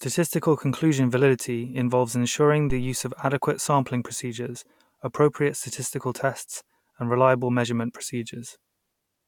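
A phantom power thump at 2.70 to 3.01 s: a supply switching on the live input sends a step through the coupling capacitors, giving a deep thump peaking about -17 dBFS that decays in roughly 70 ms.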